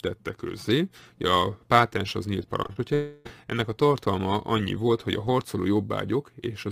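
Between 2.63 and 2.78 s there are three bursts of short concealed packet loss, at 2.63, 2.67 and 2.73 s, each 20 to 40 ms of missing audio. The decoder extended the preceding sound to cover them, so they come through as quick smears or wobbles with no gap.

From 2.94 to 3.28 s a drawn-out continuation of the last sound runs for about a third of a second without ever dropping to silence, most likely a long network dropout. Its length and fading synthetic character set it apart from the brief packet-loss smears before it, and the real audio resumes slightly late.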